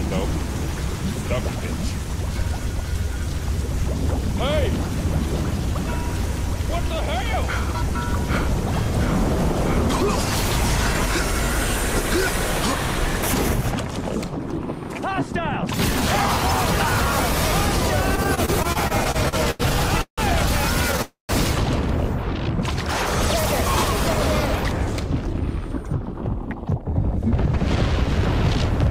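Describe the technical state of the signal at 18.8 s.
At 18.8 s you're inside a run of repeated stalls (stutter), from 18.15 to 19.62 s: packets kept arriving late, the jitter buffer emptied twelve times, and each gap, up to 88 ms, got bridged by stretching the last sound. Nothing's lost, but it drags and hiccups.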